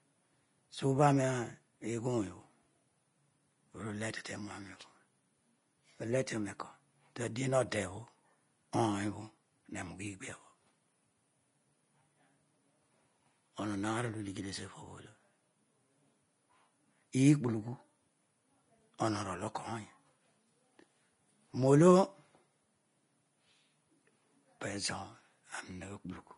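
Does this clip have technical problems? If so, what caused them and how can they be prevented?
Yes. Throughout the speech the treble has a hissy, grainy texture, tones sound roughened, attacks are blurred, and nothing is heard above 10.5 kHz. This is likely Vorbis compression at low quality, which fits a bitrate near 29 kbps. The encoder keeps a smooth spectral floor but quantises the upper residue so coarsely that fine detail turns into noise of similar energy, and it cuts everything above the lowered ceiling. To prevent this, encode at a higher Vorbis quality setting or keep a lossless master.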